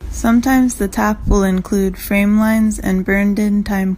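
No technical faults can be heard anywhere in this speech recording. Nothing in the signal path draws attention to itself at any moment.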